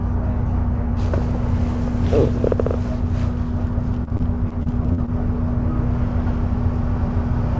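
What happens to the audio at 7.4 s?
Nothing goes wrong at 7.4 s: the sound passes through the G.722 call path intact, with no dropout, glitch or other fault at that moment.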